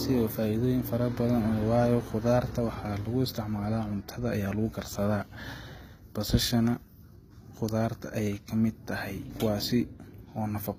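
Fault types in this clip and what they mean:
HE-AAC compression: likely an HE-AAC encode near 20 kbps rebuilding treble from copied lower bands, leaving sibilants plainly gritty and nothing above 14.9 kHz.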